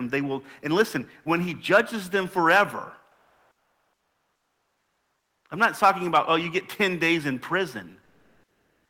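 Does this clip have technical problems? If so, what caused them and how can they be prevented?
Yes. From 3.11 to 5.45 s, and again from 8.03 s to the end, the real background drops out and a flat, featureless hiss takes its place, shifting the level by about 6 dB and about 7 dB. That's comfort noise in place of the background, likely from discontinuous transmission such as Opus DTX: the sender goes quiet during pauses and the receiver synthesises stand-in noise. Turning DTX off on the sending side prevents it.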